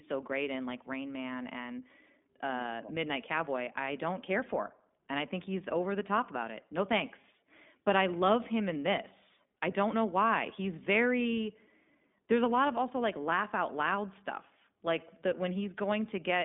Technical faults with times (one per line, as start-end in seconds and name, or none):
0.00-16.45 iLBC codec